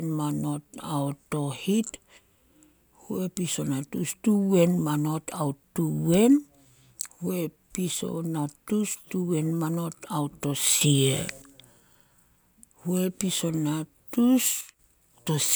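A sudden gain jump lifts the speech about 9 dB from 10.81 to 11.42 s, and another cuts it about 7 dB from 14.61 to 14.79 s. Voice and noise floor step together, likely from gain applied without a ramp. The waveform envelope shows abrupt steps, and the spectrogram brightens or dims evenly across all frequencies.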